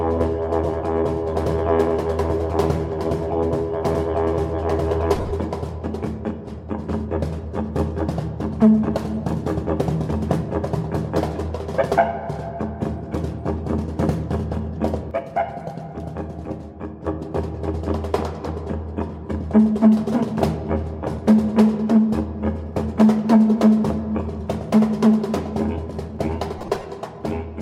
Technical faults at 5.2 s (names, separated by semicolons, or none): lost LE Audio frames